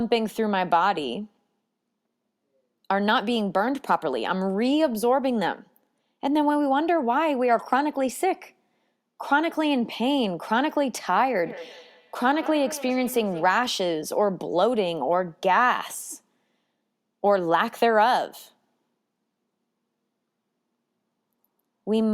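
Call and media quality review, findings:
Feedback echo between two devices, 11.46 to 13.64 s. Speech returns at a steady interval of around a fifth of a second, repeats peaking at about 16 dB below the speech, each pass thinner and more ringing. Probable component: a second device in the same room replaying the call into the first device's microphone. Neither device's echo canceller removes the other's playback. Unlike single acoustic echo or room reverb, the repeats recur and colour with each loop.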